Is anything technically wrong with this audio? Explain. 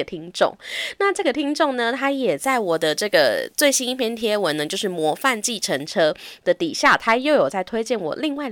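Yes. From 2.44 to 5.86 s, pre-emphasis left on: a 75 µs FM treble boost was never undone, leaving 10 kHz about 14 dB hot, so the speech turns thin, bright and sibilant.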